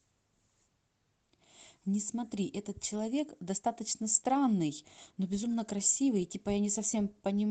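No technical faults are audible anywhere in this recording.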